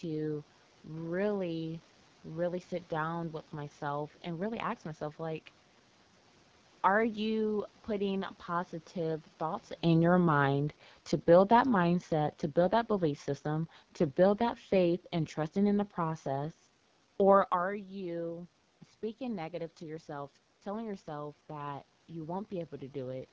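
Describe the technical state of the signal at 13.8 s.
At 13.8 s the level is partway through an automatic gain falling event that runs from 9.84 to 15.87 s. The gain control judged the input too loud or its background noise too strong and is easing its gain down by about 6 dB. The room noise sinks along with the voice, which sets this apart from a talker moving away, where the background level would hold steady.

Throughout the clip, including this moment, the AMR wideband (HD Voice) codec is audibly damaging the speech. The voice is rough and raspy, as happens when the pulse-driven coder is starved of bits, which fits a rate of about 8.85 kbit/s. Above 6.4 kHz, the top of the band is filled with shaped noise rather than real detail. That hissy upper band and grainy texture distinguish it from plain band-limiting or a narrowband codec.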